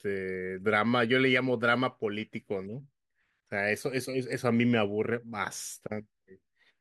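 Nothing stood out as a technical problem on listening to this speech recording.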